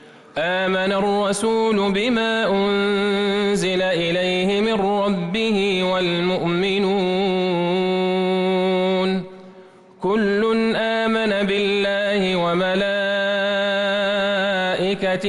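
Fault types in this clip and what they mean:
No technical faults are audible.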